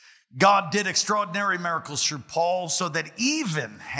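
No technical faults can be heard anywhere in this clip. Nothing in the audio calls for correction.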